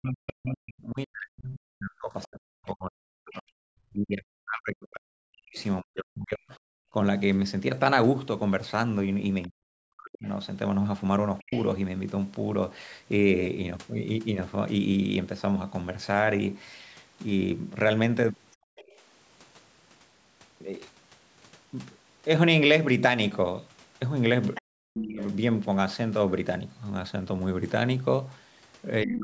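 From the start to about 11.5 s the speech repeatedly dips, thins out and breaks into pieces, with the deepest drops close to silence (around 40 dB down) and roughly seven seconds affected in total. This is speech suppressed in double talk: the other side was likely talking at the same time, and the echo canceller, unable to tell the local talker from loudspeaker echo, turned everything down. What sets it apart from gating is that the talker's own speech is what collapses, not just the room behind it.

Overlapping the end of that stretch, from 9.42 to 11.64 s, a second, fainter voice comes through about 20 dB below the main speech. This is the other side's voice leaking through, likely because the canceller did not fully remove the loudspeaker signal picked up by the microphone. Unlike suppression, this adds sound rather than removing it.

At 18.55 to 18.76 s the background drops out for about 200 ms, by about 40 dB. 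This is background gated by the echo canceller, which clamped the microphone while the loudspeaker was playing. It is followed immediately, from 18.76 to 18.96 s, by a brief scrap of leaked far-end voice about 25 dB down, the likely residue the canceller missed once it let go.

Another short leak appears at 24.55 to 24.62 s, louder at about 15 dB below the speech. Then from 24.78 to 25.22 s the speech is again pushed down, by up to about 40 dB over roughly 400 ms, the likely result of both sides talking at once. A final, milder suppression of about 25 dB runs from 29.04 s to the end of the clip. Throughout, the call microphone processing leaves nothing above 8 kHz.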